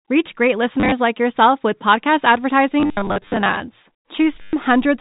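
Packet loss with last packet repeated shows up at 0.8 to 0.92 s, just before "like yourself with podcast", then again at 2.8 to 3.6 s right after it, and at 4.43 to 4.53 s. Dropped packets get filled by replaying the previous one, so you hear a robotic stutter buzzing at about 100 Hz, which fits 10 ms packets. All of it sits inside the 4 kHz telephone band of the G.711 coding.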